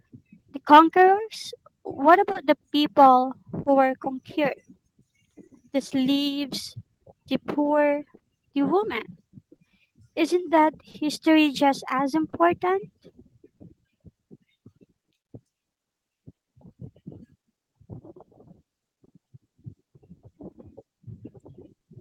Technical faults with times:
0.00-22.00 clock drift between sender and receiver
0.39-0.45 short stall from a late packet
2.32-2.38 short stall from a late packet
3.63-3.69 short stall from a late packet
5.47-21.85 scattered short gaps

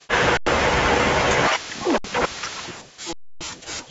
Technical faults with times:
0.08-0.12 echo leak
0.37-0.46 underrun with held sample
1.14-3.91 speech suppressed in double talk
1.98-2.04 underrun with held sample
3.13-3.41 underrun with held sample

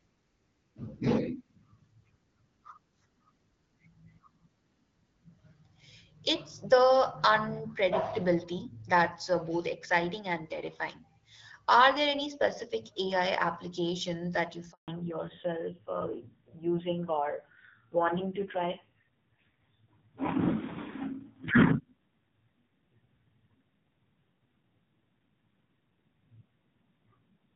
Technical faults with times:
14.72-14.88 handover gap
14.88-27.56 fallback to narrowband

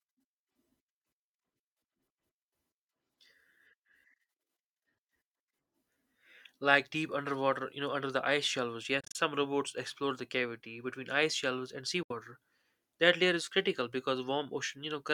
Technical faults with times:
9.00-9.16 Bluetooth dropout
12.03-12.11 Bluetooth dropout

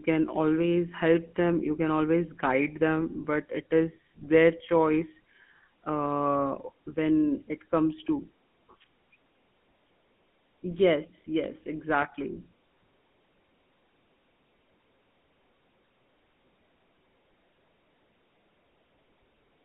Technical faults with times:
0.00-19.64 GSM full-rate codec

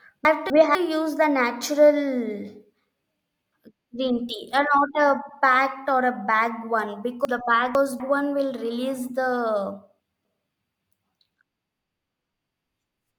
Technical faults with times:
0.25-0.75 chunks out of order
7.25-8.00 chunks out of order
10.00-10.50 chunks out of order

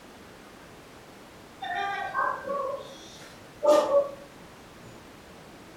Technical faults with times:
none

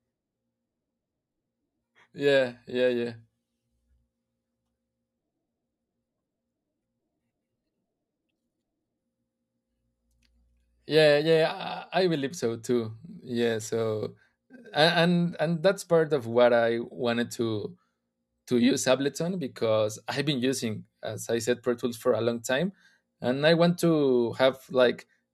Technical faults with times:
13.10-14.74 crude rate conversion

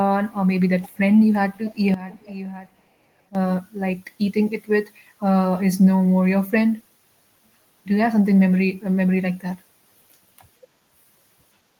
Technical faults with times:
0.82-0.99 echo leak
1.55-1.80 echo leak
1.94-3.35 sudden gain jump
2.10-2.82 echo leak

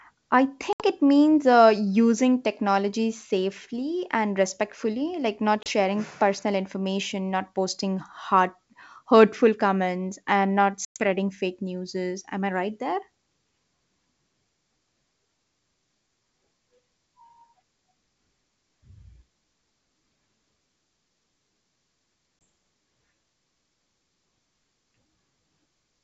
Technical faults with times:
0.73-0.82 packet loss on an ADPCM call
5.63-5.70 packet loss on an ADPCM call
10.85-11.06 packet loss on an ADPCM call
22.44 packet loss on an ADPCM call

